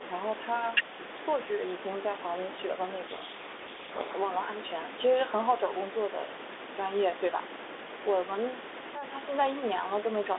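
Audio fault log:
3.06–4.15 s, codec payload misread: for about 1.1 s the speech is buried in harsh distortion. The decoder unpacks the G.726 code words with their bits in the wrong order, so the difference steps it adds to its adaptive prediction come out wrong.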